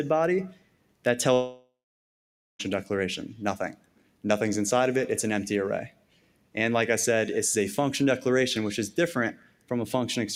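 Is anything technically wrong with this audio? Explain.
Yes. Throughout the clip the level breathes in and out by about 5 dB. Sustained parts and decaying tails sag while sharp onsets mostly come through, so the sound pumps and thins. This is a noise suppressor applied to music or sounds. A processor tuned for speech is treating steady content, ambience and reverb as noise and pulling it down whenever nothing sudden is happening.

Four passages sink much further, about 12 dB at their deepest: 0.53 to 1.05 s, 3.73 to 4.24 s, 5.90 to 6.56 s, and 9.33 to 9.71 s. Each lasts roughly half a second, and the longest is about 0.7 s. In each, the sound is cut by the noise suppressor. It judged these stretches to be mostly noise and attenuated them harder than their surroundings, so held or fading material drops away and decays end early.

From 1.33 to 2.62 s the audio vanishes for about 1.26 s. The last sound carries on briefly as a fading smear, then gives way to roughly 0.87 s of silence before the clip resumes further on, with that stretch simply gone. 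This is most likely a long network dropout. The receiver had nothing to play, so it padded the gap by extending what it last had, and that filler died out into silence.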